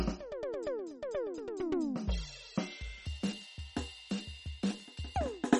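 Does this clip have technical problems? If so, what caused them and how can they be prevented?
Yes. MP3 compression damage is plainly audible throughout the music. The detail has a watery, swirling quality, with metallic chirps on bright transients. The likely cause is an encoder starved of bits. It dropped weak frequency lines that flicker on and off between frames, which points to a bitrate of around 32 kbps. Encoding at a higher bitrate, or keeping a lossless master, would prevent this.

A section at the wrong speed runs from 3.06 s to the end of the clip. It plays 1.34 times faster than it should, so the music suddenly sounds hurried and shifts up by about five semitones, because tempo and pitch rise together. The likely cause is that this portion was played back or edited against the wrong clock rate, so its samples were read out too quickly. Checking that every segment's sample rate matches the project before joining or playing would prevent it.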